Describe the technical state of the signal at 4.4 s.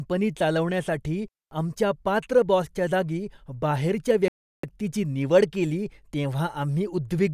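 A playback stall runs from 4.28 to 4.63 s, silencing the speech mid-flow for about 350 ms. The player likely ran short of data or had its output thread blocked, so nothing reached the output until it recovered and sound returned.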